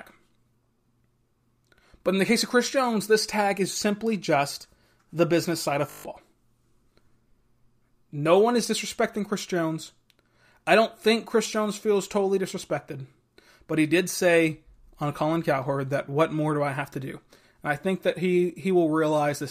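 Right after "the business side of", from 5.9 to 6.04 s, there's a system hang loop: a 20 ms chunk repeats seven times, giving a 50 Hz buzz.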